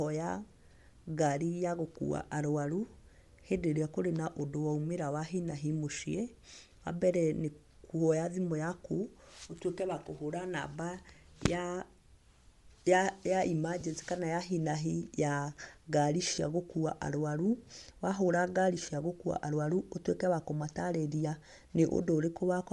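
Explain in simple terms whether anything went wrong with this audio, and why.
The speech has a breathy, grainy edge all the way through, likely from Bluetooth LC3 compression squeezing the sound and filling its upper range with noise.

Three brief noisy smears are lost LE Audio frames, where the decoder patched missing sound with a scrambled copy of what came before. They come at 13.80 s, just before "kana ya hi na", lasting about 20 ms; at 16.35 s, between "na hi ya ngari" and "gũkuua arwaru", lasting about 30 ms; and at 18.86 s, lasting about 20 ms.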